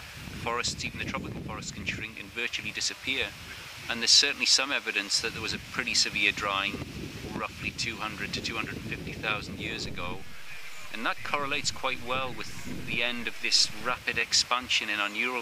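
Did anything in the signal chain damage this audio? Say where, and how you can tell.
Yes. Overlapping chunks at the buffer stage: brief stutters at 2.17, 6.19 and 14.21 s. Each join replays about 13 ms, with 4 s chunks overlapping.

A DC step at the converter: a low thump at 9.87 s as the zero line jumps. The offset lasts until 13.94 s.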